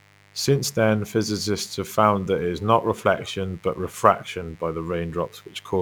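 A steady, raspy mains buzz sits under this speech clip from start to finish, tied to a 50 Hz supply and roughly 30 dB below the speech. Sharp switching spikes, twice per mains cycle, from a dimmer, rectifier or unshielded lead, spread harmonics up into the kilohertz range.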